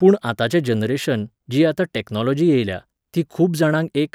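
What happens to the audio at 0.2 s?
Nothing goes wrong at 0.2 s; the speech carries on cleanly there with no dropout, click or distortion.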